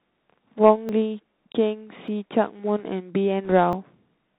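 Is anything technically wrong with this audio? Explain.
Yes. The speech is muffled and narrowband throughout, with a granular hiss beneath it and scratchy s sounds. This comes from the Bluetooth CVSD headset codec, which sends one up-or-down bit per sample at a rate that fits 64 kbit/s. Its adaptive step cannot track fast, loud high content, and it passes nothing above 4 kHz.

At 0.89 s, 2.08 s and 3.73 s the sound jumps forward with no gap. The likely cause is a dropped buffer (overrun), where the hardware overwrote samples before the program collected them and the two sides were spliced together. The first two skips lose about 10 ms each and the last about 30 ms.

From 3.45 to 3.52 s a short rushing crackle sits on the speech, without loud clicks. These are bit errors on the Bluetooth voice link at roughly one percent. Each flipped bit nudges the signal only slightly, and the effect fades quickly, so the errors add noise rather than pops.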